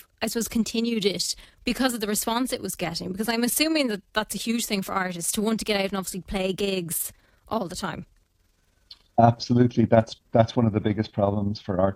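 From start to finish, the speech carries an overlap-add ripple: the level swells and dips by about 6 dB roughly twenty times a second. The audio was split into windowed frames and rebuilt with an overlap whose windows do not sum to a constant gain, so every frame boundary leaves a periodic level change. At around 20 Hz, which points to a frame hop near 50 ms, it is heard as a rough tremolo across every syllable.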